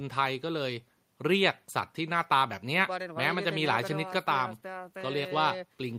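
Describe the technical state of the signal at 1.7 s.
At 1.7 s the speech signal is intact, with no audible fault at that moment.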